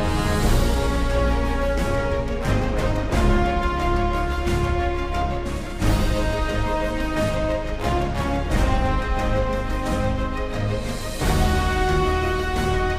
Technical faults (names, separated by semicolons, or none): none